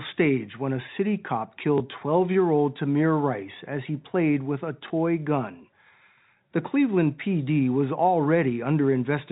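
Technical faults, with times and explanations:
1.78–1.80 s and 4.88–4.90 s: packet loss with last packet repeated. Right after "when a city cop" and again after "he played with a", a single 20 ms packet went missing, and the receiver filled the gap by replaying the one before it. Each single repeat gives a tiny blip instead of a dropout, heard within the narrow, 4 kHz-topped band of the G.711 telephone coding.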